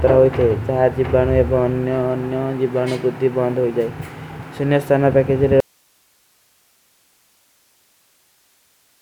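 Speech cuts off abruptly at 5.60 s, leaving only faint hiss far below the signal through the end: an audio dropout to a faint residue, likely a lost feed into a still-live path.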